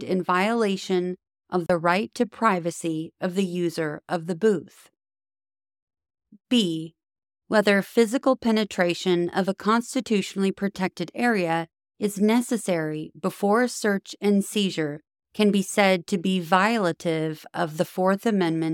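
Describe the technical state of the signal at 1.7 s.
A block of digital silence runs from 1.66 to 1.70 s, between "in violation of" and "right to privacy of". For about 33 ms the sound cuts out and returns with no fade, and the gap is heard as a brief hole.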